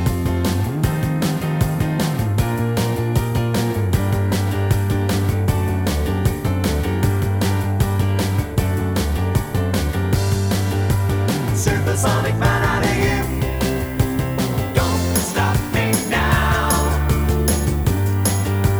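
The audio has low bit depth with noise shaping from 13.00 s to the end at 18.80 s. The signal drops to an 8-bit word length, and the rounding error is steered upward in frequency, so a thin, steady hiss appears roughly 25 dB below the signal and grows much brighter toward the top of the band. Plain 8-bit truncation would give flatter, grittier noise that tracks the signal, and ordinary broadband hiss lacks this sharp upward tilt.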